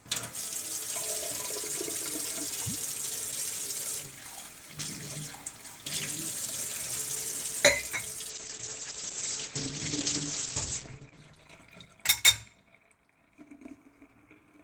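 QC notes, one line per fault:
8.32–12.55 s, call bitrate drop: the encoder's bit budget collapsed, as if from 32 to 11 kbps, so audio turns coarse and muffled, top band cut to 8 kHz.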